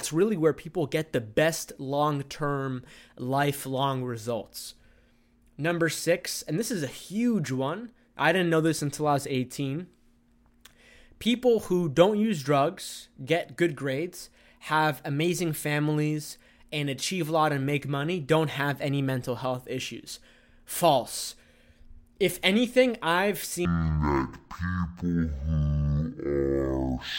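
From 23.65 s to 27.19 s, right after "anything I've" and running up to "of type", the speech suddenly slows to half speed and drops a full octave, 12 semitones down, with a faint mirrored copy of the sound showing up in the upper half of the spectrum. This is stereo read as mono. The left and right samples, which alternate in the stream, are played one after another as a single channel, which doubles the playback time and halves every frequency.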